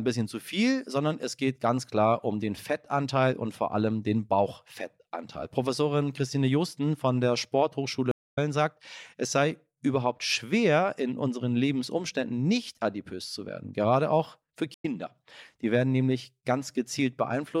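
Stream reconnects at 8.11–8.38 s and 14.74–14.85 s: the connection dropped, leaving about 250 ms and then 96 ms of silence, and a fresh decoder picked up the live stream further on. The audio skips ahead roughly 300 ms before "sagt es sei überhaupt", then a shorter jump after "auch für".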